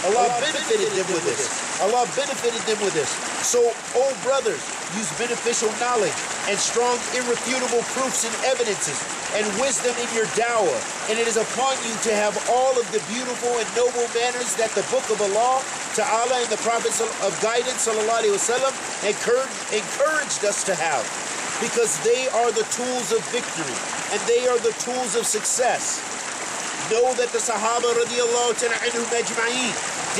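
From the very start to 1.76 s a doubled audio track is heard: a second, full-band copy trails the sound by roughly 150 ms at about 5 dB lower, likely from a slower capture path. The waveform shows shifted repeats, then the copy cuts off abruptly.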